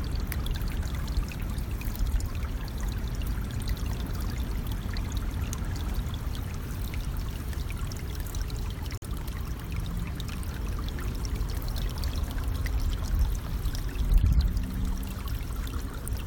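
An everyday-sound recording with one sharp dropout: the audio cuts abruptly to silence from 8.98 to 9.04 s, a 60 ms hole that fits two consecutive compressed frames being lost. This is a corrupt frame muted: damaged frames were rejected by the decoder and replaced with silence, keeping the timing intact.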